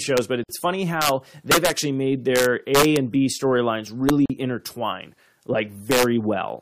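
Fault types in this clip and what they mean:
Integer overflow: Peaks in this speech exceed the integer limit by up to about 4 dB and wrap to the opposite sign rather than being limited. The result is violent cracks, sharper than clipping, worst in the louder stretches around 1.5 to 1.7 s and 2.4 to 3.0 s.
Gap at a join of encoded pieces: Separately encoded pieces were joined with their encoder start delay and end padding left in. Continuous speech breaks with a gap of 53.7 ms at 0.44 s and 41.2 ms at 4.26 s, its smeared edges leaving a shorter stretch of silence, then resumes.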